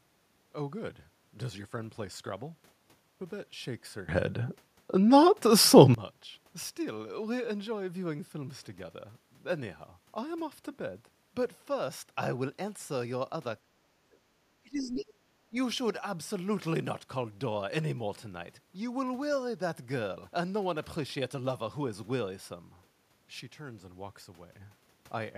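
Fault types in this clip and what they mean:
Sudden gain jump: At 4.09 s the speech and its background noise leap up together by about 18 dB with no ramp, staying loud until 5.94 s, and at 23.41 s both drop by about 6 dB until 24.52 s. Each change lands between one sample and the next, so the level steps rather than glides. The likely cause is a digital gain setting or bit shift applied instantly instead of being faded in.
Speech suppressed in double talk: The speech sinks sharply in three places, from 13.66 to 14.17 s, from 14.60 to 15.34 s, and briefly around 15.51 to 15.56 s. The middle stretch falls deepest, by roughly 35 dB, the first by roughly 30 dB, and the last only by roughly 10 dB, so the talker seems to be cut out in pieces. The likely cause is an echo canceller facing both sides talking at once and muting the near talker along with the loudspeaker echo.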